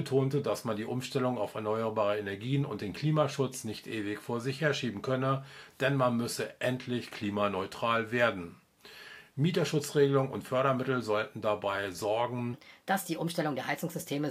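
From 12.54 s to the end, a section at the wrong speed: the audio suddenly runs at 1.25 times its proper rate, so everything turns hurried and rises by roughly four semitones. The likely cause is a player or editor handling that stretch against the wrong clock. Tempo and pitch jump together at a single point, which rules out a pitch-shift or time-stretch effect, since either of those would change one without the other.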